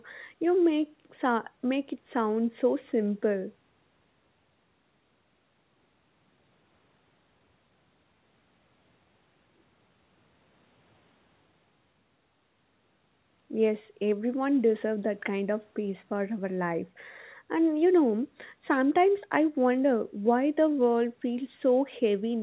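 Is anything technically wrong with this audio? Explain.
No, the speech carries no technical fault; it has passed normally through call microphone processing and a WebRTC call path, and nothing is heard above about 4 kHz, which fits a narrowband telephone codec such as G.711 A-law at 64 kbps.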